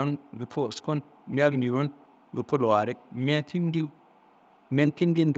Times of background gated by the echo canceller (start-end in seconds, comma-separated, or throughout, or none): none